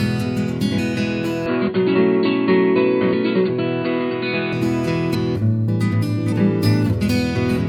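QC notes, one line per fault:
0.77, 3.12, 5.14 and 6.31 s: compressed frames skipped. Runs of 26.1 ms frames go unplayed, so the music jumps ahead roughly 150 to 300 ms.
1.46 to 4.53 s: input switched to a poorer device, likely. Nothing passes above 4.6 kHz, so the music turns dull, with faint new noise and no gap or level jump.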